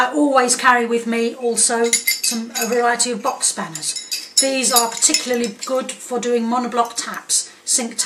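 Hard clipping shows up twice. From 0.38 to 0.71 s the peaks overshoot by about 2 dB and get sheared flat, giving a light crackle, then at 4.38 s a brief hit about 5 dB over snaps harder, sprinkling high harmonics.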